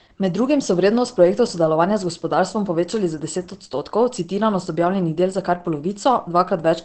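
Throughout the speech, the sound is muffled and hoarse, with nothing above 8.4 kHz. The likely cause is heavy Opus compression in its SILK speech mode. The narrow band and rough texture fit a very low bitrate near 12 kbps.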